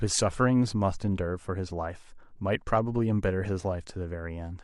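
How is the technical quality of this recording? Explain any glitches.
No glitches can be heard anywhere in the recording, and the speech signal stays continuous and stable throughout.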